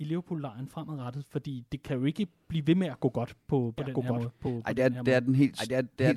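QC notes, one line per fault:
3.78 s to end: doubled audio track. A second, clean, full-band copy enters abruptly, about 5 dB quieter and roughly one second behind, most likely from a slower capture path.
4.45 s: compressed frames skipped. The audio jumps ahead by about one frame, which fits a 24 ms frame.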